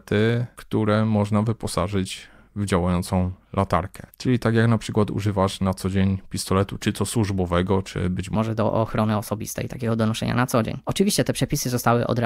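A section at the wrong speed, likely from playback or editing run against the wrong clock, starts at 8.35 s, just after "to służbowego czy być", and lasts to the end. The speech runs 1.2 times too fast, pitched about three semitones higher and sounding hurried.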